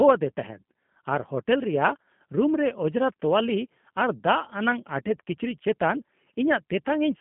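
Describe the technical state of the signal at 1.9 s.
G.729 codec coding runs throughout, including 1.9 s: speech rebuilt at 8 kbit/s from filter, pitch and pulse parameters sounds rough and synthetic, with nothing above 3.6 kHz.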